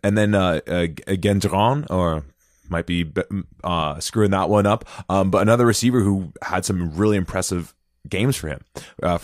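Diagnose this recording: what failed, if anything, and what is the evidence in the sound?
Nothing in this recording points to a failure at any stage of the chain. There is no evidence in the sound of anything having gone wrong between capture and playback.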